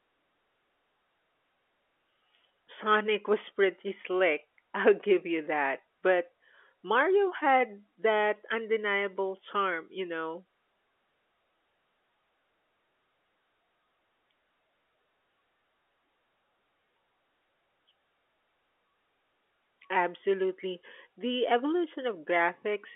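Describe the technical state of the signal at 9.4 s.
At 9.4 s the speech is intact, with no fault at that moment, just the narrow telephone band of G.711 coding running normally beneath it.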